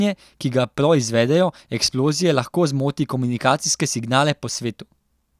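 Nothing goes wrong anywhere in the speech here; there isn't a single technical fault to point to.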